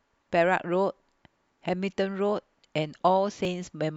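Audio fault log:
3.45 s, overlap between stream segments: Two segments claim the same moment, so about 9 ms of speech is trimmed. The waveform jumps, giving a tiny skip.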